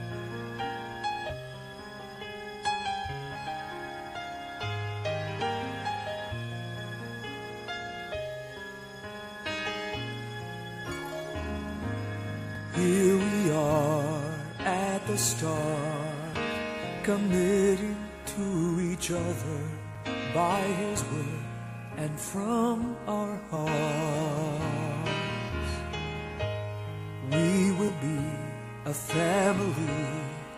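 From 0.13 s to 30.05 s there are clock slip clicks: regular ticks roughly every 0.7 s, about forty in all. Each is a single dropped or repeated sample, most likely from two unsynchronised clocks differing by around 30 ppm.

At 1.29 s, compressed frames skipped: the audio jumps ahead by about 200 ms, roughly ten 20 ms frames, because frames were missing or rejected by the decoder. The same fault recurs from 27.88 s to 27.90 s, skipping about 70 ms, roughly four frames.

At 12.55 s and 19.95 s, a block of digital silence: gaps of 2.96 ms and 5.33 ms, the second fitting a 256-sample buffer. The output buffer likely went unfilled, and at these lengths each sounds as an abrupt tick or dip, not audible silence.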